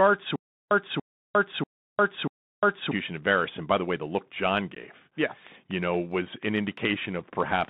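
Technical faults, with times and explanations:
Throughout: Bluetooth CVSD headset codec, a one-bit delta modulator at 64 kbps confining speech to roughly 150 Hz to 3.7 kHz, with scratchy sibilants and a granular hiss underneath.
0.36 to 2.91 s: Stutter with silent gaps, where a 285 ms fragment replays four times, each followed by 354 ms of digital silence, likely a stalled stream retrying its last buffer.
4.75 to 4.77 s: Unconcealed Bluetooth headset packet loss, with a 15 ms abrupt hole, about two voice packets dropped and replaced by silence or an idle pattern.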